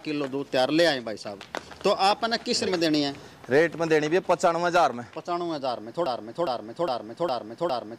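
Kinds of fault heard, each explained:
Broken-record loop: from 6.06 s to the end, one 0.41 s fragment repeats exactly, back to back, five times, most likely because playback or the stream stalled on its last buffer; unlike an echo, nothing fades and the audio that should follow is lost.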